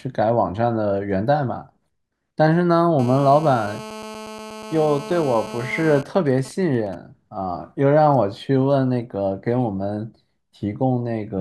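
From 2.99 to 6.02 s, a GSM phone buzz sits under the speech. A 2G handset in a call is pulsing its transmitter about 217 times a second. The audio circuit rectifies those pulses. The result is a harsh, raspy 217 Hz buzz, rich in harmonics, about 15 dB below the speech.

From 6.03 to 6.95 s, the buzz gives way to GSM signalling bursts. The call continues, but the talker has gone silent, so the phone transmits only short groups of bursts. These come through as even ticks with a longer 217 Hz buzz twice a second, roughly 20 dB below the speech.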